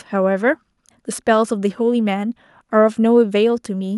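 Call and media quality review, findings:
Nothing to flag on this speech recording; no faults heard anywhere in it.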